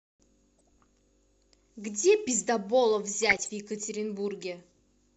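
A speech clip with DAB burbling twice, from 0.58 to 0.69 s and from 3.23 to 3.51 s. The bursts hit 10 and 12 frames of the speech. Weak reception let bit errors, roughly 0.5 and 0.7 percent, slip past error correction. Corrupted samples put short blips of noise in single sub-bands.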